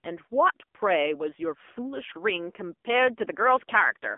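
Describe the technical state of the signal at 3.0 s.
At 3.0 s the speech carries AMR narrowband mobile codec damage, present throughout. Nothing passes above 3.5 kHz or below 250 Hz. The low-bitrate vocal-tract model sounds buzzy and synthetic, which fits roughly 7.4 kbps.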